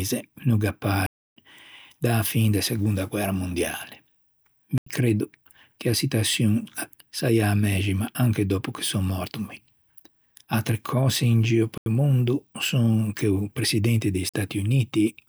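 At 1.06 s, right after "no gh'à", the speech drops into a block of digital silence lasting about 0.3 s. Shorter blocks follow at 4.78 s (85 ms, just before "creddo che a"), 11.78 s (85 ms, after "in gio"), and 14.29 s (45 ms). The two 85 ms holes fit a 4096-sample buffer left unfilled. Each block switches abruptly to silence and back, and the gaps are heard as hard dropouts.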